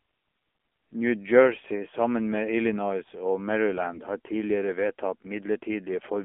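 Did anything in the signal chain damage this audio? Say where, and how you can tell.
Yes. At the codec stage, AMR narrowband mobile coding at 7.4 kbps limits the whole clip to roughly 250 Hz to 3.4 kHz, with audibly buzzy, synthetic speech from coarse excitation pulses.

At the network stage, AMR bit errors make the speech briefly hoarse and gargly from 3.90 to 4.04 s. Flipped low-priority bits, likely a few percent, misplaced the excitation pulses across several 20 ms frames.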